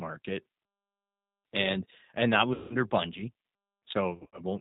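Speech throughout sounds rough and plainly synthetic, with nothing above 4 kHz. This is the G.729 codec at 8 kbit/s, which rebuilds speech from a filter, a pitch predictor and sparse pulses.

From 2.54 to 2.76 s, just after "and that", the speech is stretched out and fades. This is VoIP packet loss concealed by the speech codec: about 160 ms went missing, and the decoder stretched its last sound while lowering the gain. From 4.11 to 4.42 s, shorter losses are scattered across about 260 ms, each gap 40 ms or less.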